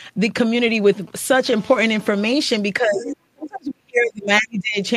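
From 0.46 to 1.42 s, GSM signalling bursts break in: a nearby 2G handset sends short clusters of radio pulses while it signals to the network, and the audio circuitry rectifies them into sound. The result is a galloping dit-dit-dit of brief 217 Hz buzzes, sitting roughly 25 dB below the speech. On a spectrogram these show as short vertical blocks with stacked harmonics at multiples of 217 Hz. The waveform shows matching clumps of sharp, regular pulses.

At 1.46 s this becomes continuous GSM phone buzz until 2.33 s, because the handset has moved into a call and now transmits its 217-per-second bursts without pause. The rectified pulses produce a hard, raspy tone about 25 dB below the speech and unrelated to it. A spectrogram shows an unbroken comb of horizontal lines at 217 Hz and its harmonics running far up the spectrum. In the waveform, a fine sawtooth-like ripple rides under the speech.

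From 2.79 to 4.78 s the speech is suppressed in double talk. The talker's level dips, with the deepest dips reaching around 35 dB. The likely cause is an echo canceller that could not separate this talker from the far side's loudspeaker sound, with both sides speaking at once, so it pulled the whole signal down. The waveform shows the envelope collapsing in ragged notches over about two seconds. The spectrogram shows upper frequencies thinning out or vanishing in patches.

Inside that stretch, from 3.02 to 3.16 s, the other side's voice leaks through as a brief scrap, roughly 10 dB below the speech. This likely happens because the canceller left part of the loudspeaker signal in the microphone path. On a spectrogram it appears as a short, faint harmonic pattern that does not match the surrounding speech. The waveform shows a small burst of extra energy.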